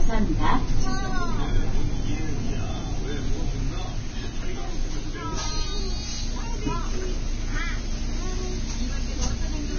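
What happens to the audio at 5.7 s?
At 5.7 s the sound is hissy and grainy, with nothing above 6.5 kHz, as it is across the whole clip. Tones sound rough and attacks are smeared. The likely cause is heavy Vorbis compression at a very low bitrate, perhaps near 18 kbps. The codec drops the top band and quantises the remaining treble so coarsely that fine detail turns into noise.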